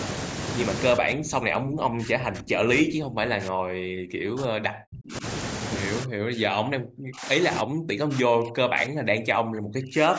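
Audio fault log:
0.95–5.24 s and 6.04–10.19 s, speech suppressed in double talk: across about four seconds in each span, the speech sinks by as much as about 40 dB, thinning out at the top or breaking into fragments. The likely cause is an echo canceller that mistook the near talker for loudspeaker echo while the far side spoke, and turned both down. Unlike packet loss, the dips follow the overlap rather than arriving as fixed-length gaps.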